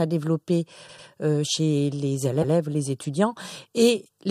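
Repeated frames occur twice in this speech, where a block of compressed frames was decoded again. From 0.88 to 1.07 s, just before "euh chez les", a 96 ms block plays two extra times, a stutter that adds 192 ms. From 2.41 to 2.53 s, after "développer euh chez les", a 120 ms block repeats once, adding 120 ms.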